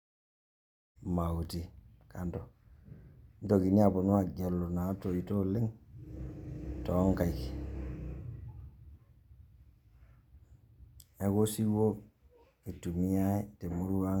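No technical faults are present.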